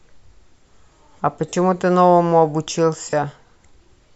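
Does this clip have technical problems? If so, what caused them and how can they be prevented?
Yes. Bluetooth LE Audio frames were lost on the wireless link, and the LC3 decoder covered each gap by reusing the last good spectrum with randomised phase signs, fading it as the gap continued. The speech briefly turns into a hissy, smeared version of itself at 1.49–1.53 s, a 40 ms dropout that fits about four 10 ms frames, and again at 3.10–3.13 s, lasting 30 ms. The light lossy compression elsewhere is not the cause. Keeping the devices close, free of obstructions and away from crowded 2.4 GHz traffic would prevent these lost frames.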